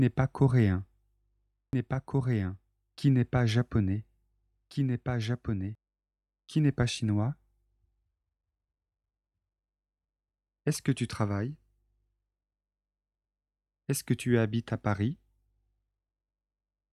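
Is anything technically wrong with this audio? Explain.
Yes, there's a doubled audio track from about 1.73 s to 5.75 s. A second copy of the sound runs roughly a second and a half behind the original, a bit quieter, around 5 dB down. It's full-band and dry, with no decay or room colour, so it reads as a clean overlay rather than an echo, and it cuts in and out abruptly. The likely cause is the audio being captured again through a slower path, or an edit leaving two out-of-step copies stacked.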